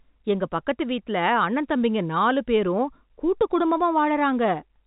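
Speech over a G.711 telephone coding path, band-limited to about 3.8 kHz as expected for that format, with no faults to report.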